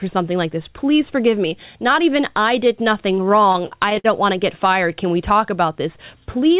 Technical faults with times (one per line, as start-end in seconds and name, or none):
3.12-4.06 repeated stalls (stutter)